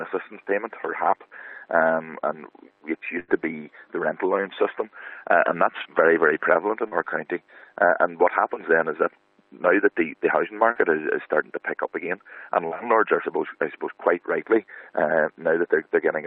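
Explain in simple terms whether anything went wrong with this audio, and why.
At 3.19 to 3.31 s there is a burst of packet loss. About 80 ms never arrived. The last sound was stretched and faded, then the audio skips ahead.

Three short concealed packet losses follow, at 6.88, 10.71 and 12.67 s. Each drops about 40 ms, patched over with a brief smear or wobble.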